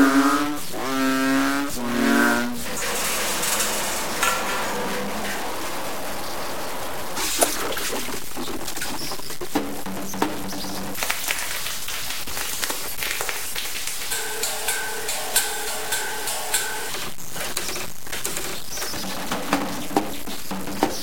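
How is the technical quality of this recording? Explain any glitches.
The recording has two technical faults: a constant distortion across the whole clip and a single transient near the end.

Throughout, a stuck bit in the data is likely, offsetting about half the samples by a step around -25 dBFS. This produces harsh, buzzy distortion and a noise floor in quiet gaps.

From 18.97 to 18.99 s there is a loud pop, likely a voltage spike from a switch or static discharge, peaking a few dB above the surrounding sound as one sharp click.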